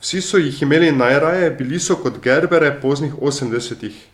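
No technical faults can be heard anywhere in the speech.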